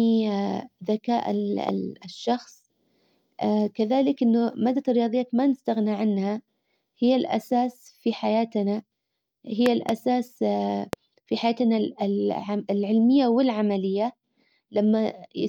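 At 1.69 to 1.71 s there's a loud pop, a sharp click sitting well above the speech, roughly 15 dB hotter, with the talking carrying straight on underneath. Between 9.66 and 9.91 s you get two of them in quick succession, then one more single pop at 10.93 to 10.95 s. It's most likely a voltage spike from a plug, switch or static getting into the chain, with the downstream circuitry rounding it into that brief thump.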